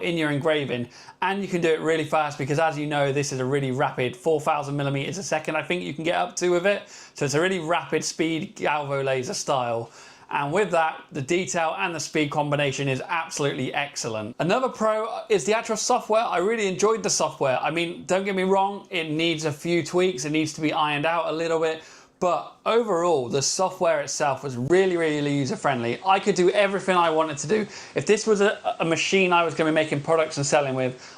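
At 24.68 s a 20 ms gap breaks the sound. From there to the end, everything above 9.8 kHz is gone, and a new noise floor sits roughly 30 dB down at about the same level. The input likely switched to a poorer device.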